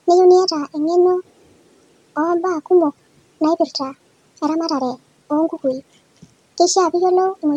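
From start to finish the speech runs at one and a half times its proper speed and sits about seven semitones higher, a wrong sample rate fault. The samples are being played faster than they were captured, with no conversion, which fits audio recorded at 32 kHz and played back at 48 kHz. Pitch and tempo rise by the same ratio together, so the voice sounds chipmunk-like and hurried. A time-stretch or pitch-shift effect would move only one of the two.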